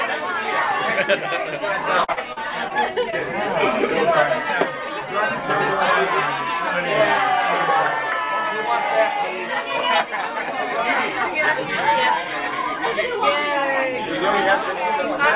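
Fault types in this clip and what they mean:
Repeated packet loss (robotic sound): From 2.04 to 2.72 s the stream breaks up four times in quick succession, and the receiver patches each hole by extending the sound that came just before it. About 140 ms goes missing, the longest gap is 44 ms, and roughly a fifth of the stretch is synthetic fill, so it comes across as choppy. A spectrogram shows short blocks of smeared, overly regular harmonics, and the waveform shows repeated, looped-looking cycles at each seam.
Short concealed packet loss: Between 3.10 and 3.14 s a single hole of about 20 ms is filled by continuing the preceding sound for roughly the same length, then crossfading back into the real signal. It is heard as a brief smear or wobble, and anything very short in that instant can drop out. A spectrogram shows a narrow vertical strip where the detail goes flat or noisy, and the waveform shows one patched stretch with a soft join on either side.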